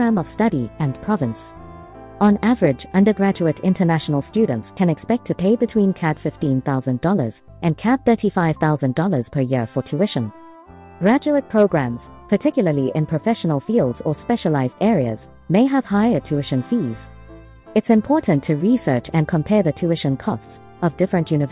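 Nothing in the audio stood out as a technical fault on listening.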